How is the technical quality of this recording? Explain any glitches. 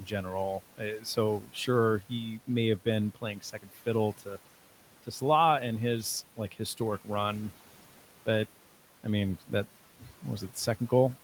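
The recording has noise-suppression problems that run through the whole clip, and in two places the suppressor also pulls down the speech itself.

Noise suppressor artifacts run from start to finish. The suppressor treats the steady room noise, which sits about 20 dB below the speech, as noise and cuts it by about 12 dB band by band, frame by frame. So the background dips between phrases and swells back under the speech.

Speech is cut by the noise suppressor at 1.41–1.68 s and at 3.15–3.81 s. In both spans the suppressor mistakes quieter parts of the speech for background and lowers them by up to about 11 dB, for roughly a sixth of a second in the first span and about a third of a second in the second. Those sounds come across swallowed and faint.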